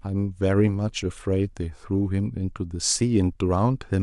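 There are no technical faults to describe in this speech recording.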